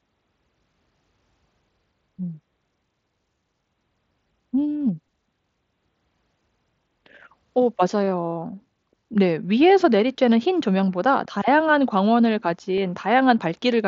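At 12.77 s a barely noticeable smear in the speech is concealed Bluetooth headset packet loss: one 7.5 ms packet dropped, and the gap was filled by repeating the preceding waveform.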